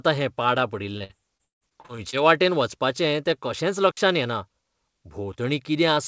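From 0.98 to 2.14 s the speech breaks up with repeated packet loss, giving a robotic sound. Eight gaps fall in that stretch, the longest 158 ms, and about 29% of it is patched by extending the previous sound, so the audio turns choppy.

At 3.91 s a digital wireless dropout mutes the signal for 60 ms. The receiver drops to near silence with a very short fade and no noise burst at either edge, leaving a clean hole in the speech. Throughout, nothing is heard above 8 kHz, which fits a G.722 call path.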